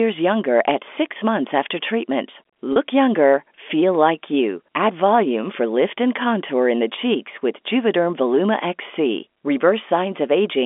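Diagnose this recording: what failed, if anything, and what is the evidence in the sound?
Network stage: packet loss with pitch repetition at 2.73–2.76 s, between "six months after treatment" and "younger feel like you". About 30 ms is missing, which fits one lost packet. The receiver bridged it by repeating the last pitch period, heard as a brief held, buzzy note in the telephone-band G.711 audio.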